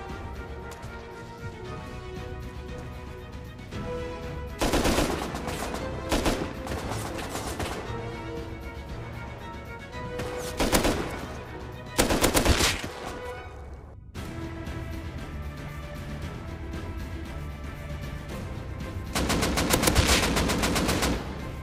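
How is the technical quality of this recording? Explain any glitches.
The technical quality of this recording is sound, with no glitches to explain.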